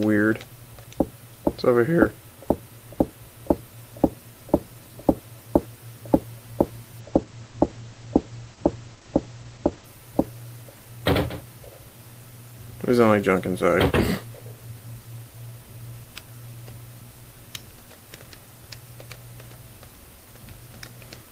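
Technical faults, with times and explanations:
7.0–9.93 s, call bitrate drop: encoding falls from 32 to 12 kbps and bandwidth narrows from 20 kHz to 8 kHz, so the sound turns muffled and coarse without gaps, unlike packet loss.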